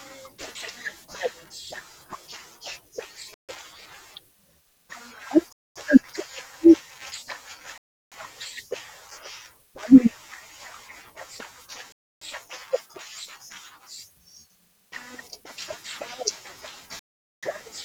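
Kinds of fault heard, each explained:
Bluetooth stall: The speech cuts to silence five times, at 3.34, 5.53, 7.78, 11.92 and 16.99 s. Each gap lasts between 0.15 and 0.43 s, then the sound resumes. The likely cause is interference delaying wireless packets until the headphones' buffer ran dry.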